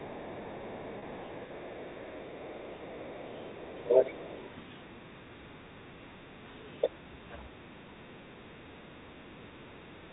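Speech clip over a telephone line, and the first thing you'll notice is the other side's voice leaking through: from the start to 4.5 s there's a second voice sitting right at about the same level as the talker, and at 6.81 to 6.9 s a short scrap of it pops up about 15 dB below the talker. That's most likely the far end coming out of the talker's loudspeaker and the echo canceller not fully scrubbing it from the mic, so you get a competing voice mixed in. Around 0.99 to 1.02 s there's a packet loss with pitch repetition: roughly 30 ms of audio went missing, and the receiver papered over it by repeating the last pitch period. Because the gap is so short, it comes across as a tiny held, buzzy note rather than a dropout. Then there's speech suppressed in double talk, likely the echo canceller getting confused when both ends talk at once and turning everything down together. At 4.14 to 4.2 s and again from 4.87 to 6.49 s the talker dips by about 5 dB. 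From 6.89 to 10.03 s it gets much heavier, with drops of around 20 dB that make the voice duck hard.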